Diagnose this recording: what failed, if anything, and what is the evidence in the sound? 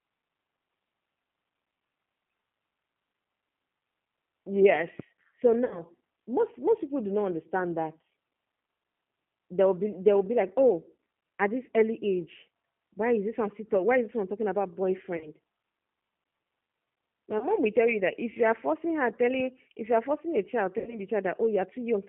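The speech passed through a G.729 codec, most likely the G.729A variant, at 8 kbit/s, over a line band of 150 Hz to 3.4 kHz. The codec rebuilds each 10 ms frame from a vocal-tract filter, a pitch predictor and a few pulses, so the speech is plainly rough and synthetic throughout, with nothing above 3.4 kHz.

At the network stage, packets were lost, and the decoder carried out packet loss concealment by extrapolating from its last pitch and filter at falling gain. The result is a stretched, fading smear at 5.65–5.82 s, 15.17–15.29 s, 17.39–17.46 s and 20.78–21.01 s. Those gaps cover about 60, 40, 20 and 80 ms, which fits runs of 20 ms packets, and the speech stays weak for a little while after each one.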